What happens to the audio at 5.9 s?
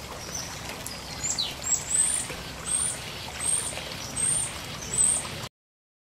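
At 5.9 s the audio is in a cut-off end: it stops abruptly at 5.47 s, mid-sound, because the final buffers were never written, leaving digital silence with no decay.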